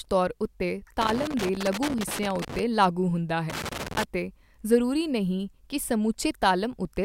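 A worn or dirty contact somewhere in the signal path is making and breaking intermittently, so this speech clip suffers loose connector crackle. The chopped signal comes through as irregular scratchy crackling from 1.01 to 2.59 s, ending just before "ਲਾਗੂ ਹੁੰਦਾ", and again from 3.50 to 4.04 s, right after those words.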